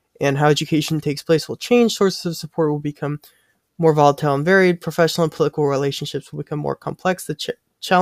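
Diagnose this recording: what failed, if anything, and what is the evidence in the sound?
Nothing failed: no stage shows a fault here.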